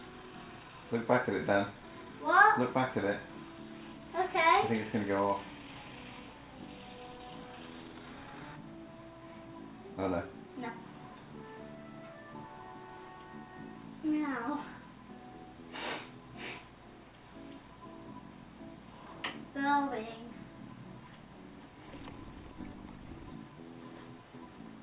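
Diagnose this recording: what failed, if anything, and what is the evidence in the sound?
Nothing in the recording stood out as a failure on listening.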